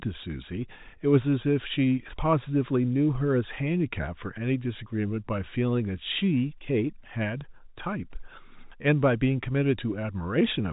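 There are no technical faults to describe in time order; the speech comes through the narrow band of an ordinary G.711 telephone line with nothing audible above about 3.8 kHz.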